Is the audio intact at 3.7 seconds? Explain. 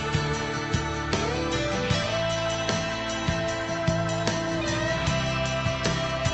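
Yes, the audio is intact at 3.7 seconds, with no dropout, glitch or other fault at that moment.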